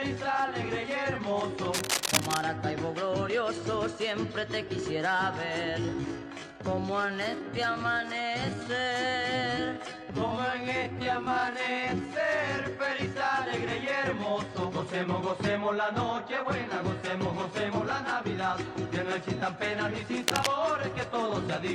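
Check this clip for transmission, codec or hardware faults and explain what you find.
Two kinds of fault are present: cable scratch noise and a time-stretched section.

Cable scratch noise occurs from 1.73 to 2.41 s and from 20.21 to 20.47 s. It is likely a worn connector whose contact flickers. The result is rough scratching, roughly as loud as the sound itself.

A time-stretched section runs from 5.63 to 12.11 s, slowed to 0.59 times speed. Short pieces were likely repeated to hold the pitch. The audio drags.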